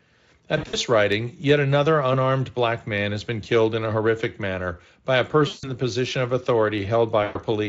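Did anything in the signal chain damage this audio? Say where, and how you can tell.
Yes, at the network stage. At 0.57–0.77 s before "writing yet another unarmed", 5.47–5.71 s after "horrific manner by a", and 7.23–7.38 s, the sound smears into a fading buzz or coloured noise. This is VoIP packet loss concealed by the speech codec, which extrapolates the missing Speex frames.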